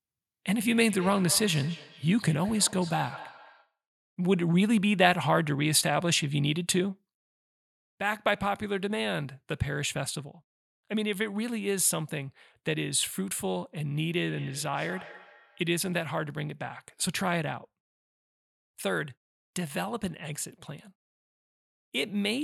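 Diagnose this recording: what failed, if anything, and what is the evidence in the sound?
Feedback echo between two devices, in call processing: at 0.66–3.77 s and 13.93–15.72 s, speech returns roughly every fifth of a second, at about -17 and -20 dB. The spectrogram shows faint, evenly spaced ghost copies.

From 7.78 s to the end the level drops abruptly by about 6 dB, likely one channel dropping out before the mono sum in the capture chain. The waveform envelope steps down and stays low.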